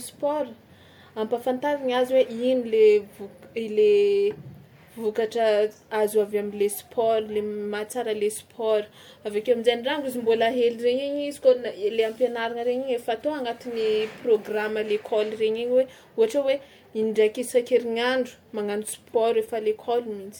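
Throughout the speech, the audio has likely been through several lossy encode and decode passes, about three rounds of MP3 at a rate near 96 kbit/s. This is generation loss: each pass quantises again on a shifted frame grid, so the noise and the holes in the spectrum build up. The result sounds swirly and hollow, with smeared consonant attacks, even though content still reaches about 20.1 kHz.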